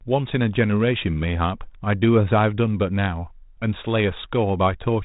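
No technical faults occur at any point in the speech, which carries the light, band-limited character of a G.726 ADPCM path at 32 kbit/s.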